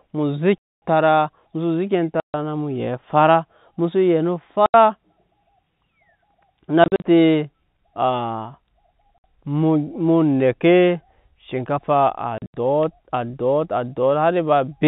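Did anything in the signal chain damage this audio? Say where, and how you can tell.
Yes, at the network stage: the speech drops into dead silence with hard edges at 0.58 to 0.82 s, 2.2 to 2.34 s (just before "na mu yɛn"), 4.66 to 4.74 s, 6.84 to 7.04 s, 9.18 to 9.24 s and 12.38 to 12.54 s. The 6.84 s and 12.38 s holes are broken into short gaps. This is packet loss filled with silence: every gap is a multiple of 20 ms, which fits 20 ms packets, and the receiver inserts zeros abruptly. The 4 kHz G.711 telephone band carries through.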